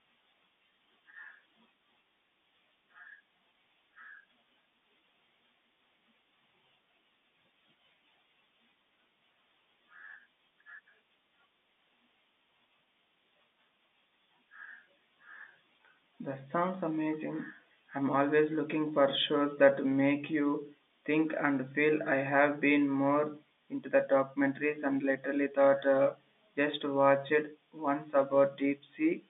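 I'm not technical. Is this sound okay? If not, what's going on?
Yes, this sound is okay, with the narrow quality of an ordinary phone line.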